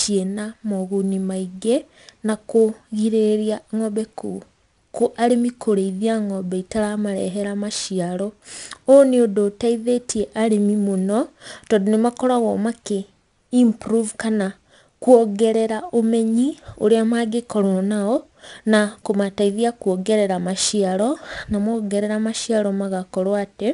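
A speech recording with 4-bit ADPCM compression audible throughout. Every loud syllable carries a gritty hiss that rises and falls with the level, and sharp onsets sound roughened where the quantiser step lags behind the signal. The damage is plainly audible and fits a rate near 89 kbps. On a spectrogram, broadband noise fills the gaps between harmonics during loud passages and thins out in quiet ones, and nothing shows above 10.6 kHz.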